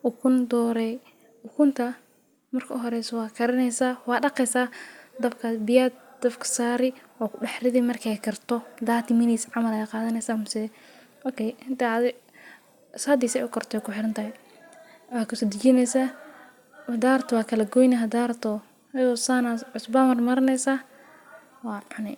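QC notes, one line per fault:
No faults heard anywhere in this speech recording.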